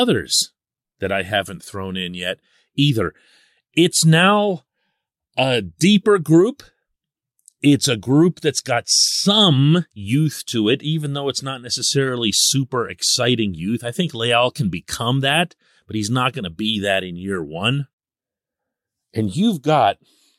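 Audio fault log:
No fault can be heard anywhere in this speech recording. The log therefore has no timed entry to give.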